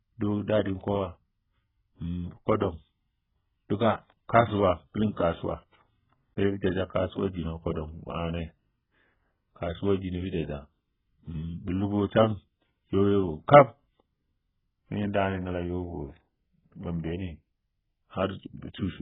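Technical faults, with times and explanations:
Throughout, AAC compression: the speech is dull and smeared, with nothing above 3.8 kHz and a warbling, fizzy texture on sibilants and held sounds, likely from heavy AAC-LC coding at around 8 kbps. The swirling, patchy spectrum sets it apart from a plain low-pass filter.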